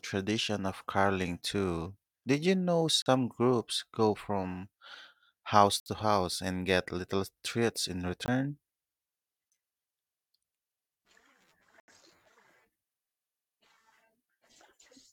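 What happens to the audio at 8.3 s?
A block of digital silence runs from 8.26 to 8.28 s, right after "get little treats in". For 20 ms the samples drop to silence and then resume. The signal is cut off mid-waveform and restarted with no fade, so each edge is a sudden jump in level. The result is a brief hole in the speech.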